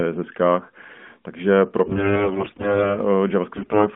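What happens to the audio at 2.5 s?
At 2.5 s the speech is inside a burst of AMR bit errors running from 1.86 to 2.99 s. Roughly a fifth of the weakly protected codec bits arrive flipped, misplacing the excitation pulses and skewing fine pitch, gain and spectral values, so the voice keeps its pitch and level but turns hoarse, scratchy and gargly.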